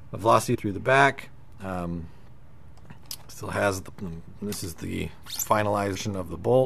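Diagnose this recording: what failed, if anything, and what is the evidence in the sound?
Three brief joins, at 0.54 to 0.56 s, 3.88 to 3.90 s and 5.95 s, where the audio jumps forward by roughly 0.4 s, 0.15 s and 0.3 s. These are compressed frames skipped at the codec stage. Each jump is a whole number of 23.2 ms frames.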